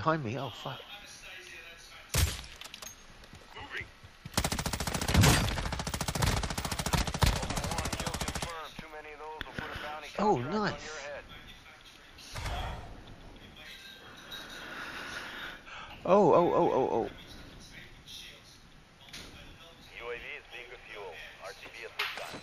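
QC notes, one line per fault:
No fault to note in these QC notes.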